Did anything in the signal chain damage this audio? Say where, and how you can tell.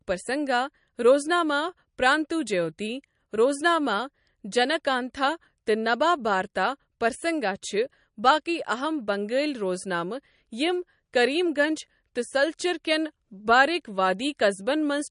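Yes. The damage sits at the codec stage and runs through the whole speech clip. Nothing is present above 10.6 kHz, a hard ceiling rather than a gentle roll-off, and the sibilants carry a watery, swirling texture with smeared onsets. This is likely MP3 compression at a low bitrate, consistent with roughly 40 kbps: starved of bits, the encoder discards the top band and zeroes weak frequency lines that flicker between frames.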